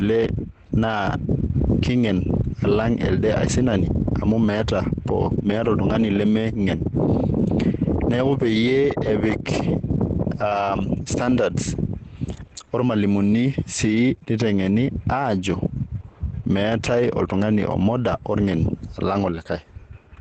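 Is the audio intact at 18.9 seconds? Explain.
No. Opus voice compression runs throughout, including 18.9 s: SILK at 12 kbps codes the speech coarsely, leaving it muffled and hoarse, with nothing above 8.9 kHz.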